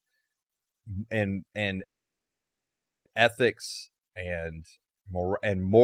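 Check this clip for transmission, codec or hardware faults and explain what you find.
A call audio freeze interrupts the speech from 1.83 to 3.07 s, after "and and". The sound stops for about 1.2 s, likely because delayed packets emptied the jitter buffer, then resumes intact at "ethics and", now running late.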